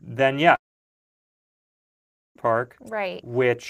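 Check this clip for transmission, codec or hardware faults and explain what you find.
One fault is present: a long network dropout from 0.55 to 2.36 s. The speech cuts off, a short fading buzz of about 40 ms carries on the last sound, then about 1.76 s of silence follows before speech returns with that 1.8 s stretch gone. The likely cause is lost packets that the receiver could only briefly conceal.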